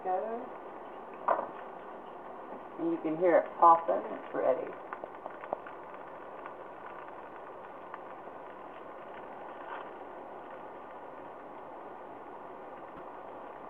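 From 12.97 to 13.00 s, a corrupt frame was decoded: flipped bits in a couple of compressed frames went straight to playback, misplacing energy across the spectrum. For those few tens of milliseconds, a short, fairly quiet chirp-like blip of noise is heard in the audio.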